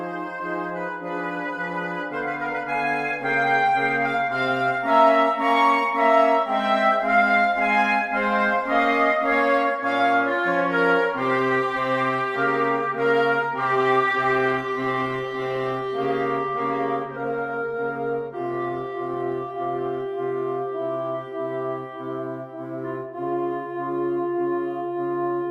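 An adaptive stream at a lower bitrate takes over from 14.06 s to 20.06 s: the player switched to a cheaper version of the stream for six seconds, consistent with the connection slowing, then switched back. In that stretch coding artefacts grow more audible, which fits Opus dropping from around 64 kbit/s to 24 kbit/s. The quality shifts abruptly at both edges, with no gap in the audio.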